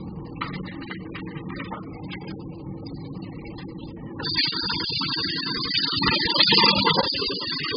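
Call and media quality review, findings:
Likely heavy AAC compression throughout, consistent with AAC-LC near 8 kbps: coarse quantisation removes all content above 5 kHz, leaving dull, smeared, warbling sound.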